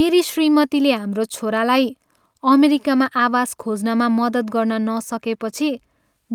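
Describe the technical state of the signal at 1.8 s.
At 1.8 s the speech signal is intact, with no audible fault at that moment.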